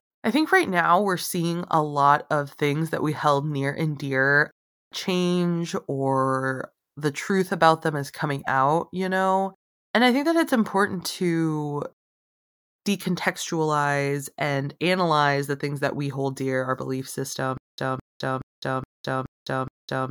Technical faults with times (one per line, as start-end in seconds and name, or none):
17.57-20.10 stutter with silent gaps